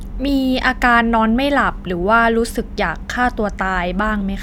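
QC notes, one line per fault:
Nothing to flag here: the speech comes through without any faults worth noting.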